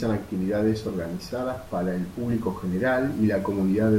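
No technical faults are audible in this speech recording; the only background is the room's own ambient noise, sitting about 21 dB below the voice.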